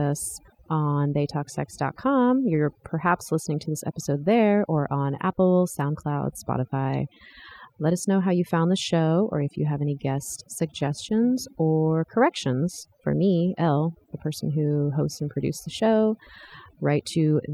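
Across the whole clip, overdone noise removal is at work: a noise reduction stage was pushed too hard on a noisy source, so any frequency band that sits close to its noise estimate gets cut deep or shut off entirely, taking the softer parts of the speech with it. The result is a background that drops away and breaks up into little twinkling specks.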